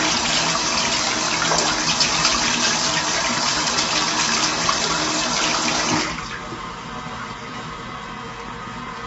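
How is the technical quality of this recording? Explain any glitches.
The quality is held back by compression damage that runs through the whole clip. From start to finish the sound is rough and grainy, and nothing reaches above 7.8 kHz. The likely cause is low-delay AAC compression (AAC-ELD), whose short frames describe fine detail poorly, a strain that fits a bitrate around 24 kbps.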